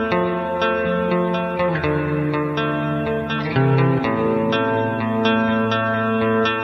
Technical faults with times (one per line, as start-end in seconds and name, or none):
none